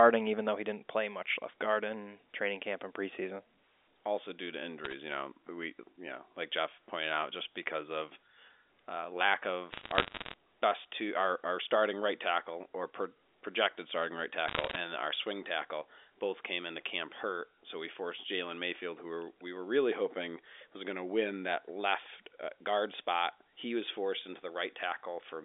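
Bit errors on the digital phone line crackle over the speech at 4.85–4.93 s, 9.72–10.34 s and 14.48–14.76 s. Flipped bits, roughly half a percent to 0.7 percent, corrupt single samples, causing sharp ticks.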